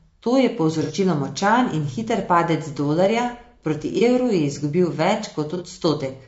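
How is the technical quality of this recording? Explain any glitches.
The quality is compromised by coarse coding throughout and three brief dropouts.

Across the whole clip the speech sounds rough and grainy, with noise filling the gaps between harmonics and a thin, artificial top end. That is likely low-delay AAC compression of the AAC-ELD kind, whose short frames resolve pitch poorly; the degree of damage fits a rate near 32 kbps.

At 0.83 to 0.91 s, before "močan in hiter padec", at 3.98 to 4.02 s, between "hiter padec dolarja proti" and "evru je izgubil", and at 5.57 to 5.62 s there are short smeared, phasey patches. This is AAC frame loss with concealment: the decoder rebuilds missing audio from the last good spectrum. The first gap fits two lost frames, the others one each.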